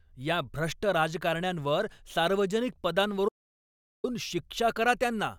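At 3.29 s, right after "या भ्रष्ट राजकारण्यांवर सार्वजनिक", the speech stops dead. This is an audio dropout to silence. The gap runs to 4.04 s, about 0.75 s in all. Nothing fills it. There is no room tone, only silence. The speech then resumes mid-flow. Whatever was said in that stretch is lost. The likely cause is an input that briefly disconnected or muted while recording carried on.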